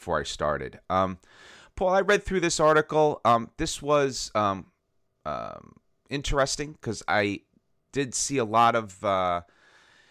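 No dropouts, clicks, distortion or level problems can be heard anywhere in the recording.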